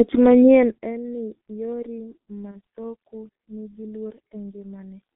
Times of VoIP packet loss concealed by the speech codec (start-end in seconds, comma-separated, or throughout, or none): 2.51-2.58